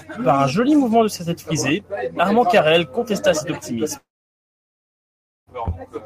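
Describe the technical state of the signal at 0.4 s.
At 0.4 s the speech is being driven about 3 dB past what a stage in the chain can handle, so that stage flattens the waveform peaks instead of passing them. This is hard clipping, running from 0.29 to 0.43 s. The squared-off tops add harmonics high in the spectrum, and with an overload this modest the result is a brief crackle on the loudest moments rather than a constant harsh fuzz.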